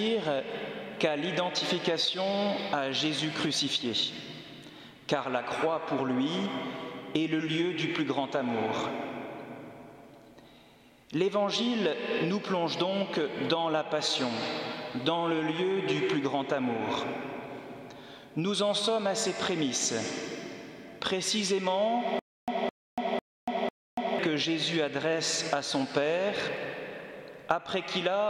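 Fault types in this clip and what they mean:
stutter with silent gaps: from 22.19 to 24.19 s, a 0.21 s burst of sound repeats four times, each followed by 0.29 s of digital silence, on an even 0.5 s cycle. Likely a stalled stream replaying its last fragment at each retry, so the intended audio is lost.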